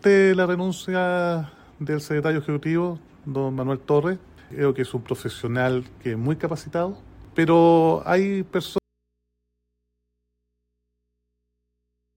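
At 8.78 s the sound drops out abruptly to a faint residue of mains hum, roughly 55 dB below the signal, until the end. The abrupt cut, unlike a pause or fade, and the hum left behind point to a likely signal loss before a still-live input.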